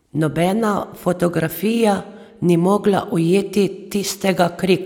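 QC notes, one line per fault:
No faults heard in this speech recording.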